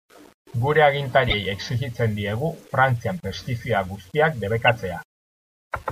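Throughout the speech, a grainy distortion rides on the sound and thickens on quiet passages, likely low bit depth without dither at around 8 bits. Unlike steady hiss, the error tracks the signal and vanishes in silence.

Corrupt frame decoded faults appear at 1.29–1.34 s, 2.37–2.42 s (far fainter), and 4.67–4.70 s just after "pestizida guztiak". Each is a brief squeak or burst at wrong frequencies, lasting one or two codec frames.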